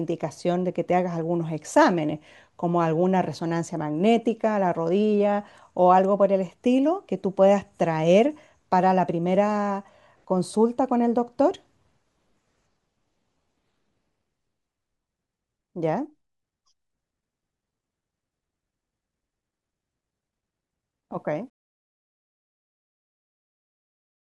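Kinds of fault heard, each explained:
Truncation distortion on a fade: The fade-out over the last few seconds is processed at too coarse a resolution, with no dither to smooth the steps. The grit fits roughly 11-bit precision. From about 21.12 s the tail turns grainy. As the level drops toward the smallest step, the waveform collapses into a few square steps. From about 22.15 s to the end the grit is at its worst.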